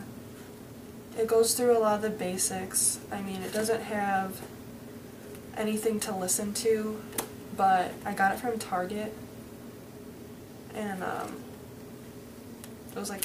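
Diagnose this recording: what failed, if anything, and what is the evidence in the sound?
Nothing in the recording points to a failure. No stage of the chain, from capture through to playback, leaves any audible evidence of a problem.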